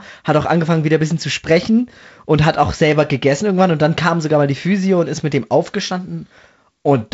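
No faults are audible; the speech rides a G.722 wideband path, band-limited at 7.7 kHz, with the light coding grain of the lower band consistent with the 48 kbit/s mode.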